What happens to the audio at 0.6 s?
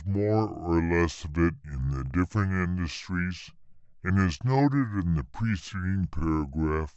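At 0.6 s the speech is affected by a wrong sample rate, which runs through the whole clip. The samples are played slower than they were captured, so the audio runs at about 0.69 times normal speed and sits roughly 6.5 semitones low, which fits 32 kHz material played at 22 kHz. It sounds deep and sluggish. On a spectrogram, harmonics and formants sit lower and syllables stretch out; on the waveform, each cycle looks wider.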